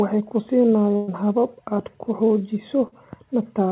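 A burst of packet loss at 0.96 to 1.09 s cuts into this speech recording: about 120 ms of audio never arrived, so the receiver stretched the last sound into a fading buzz or hiss for roughly 114 ms before jumping ahead with that stretch missing. A short concealed packet loss follows at 2.87 to 2.94 s, where about 40 ms went missing and the decoder extrapolated the preceding sound, leaving a brief smear or wobble as it blended back into real audio. Throughout, the call path passes nothing above 4 kHz, which fits a narrowband G.711 codec.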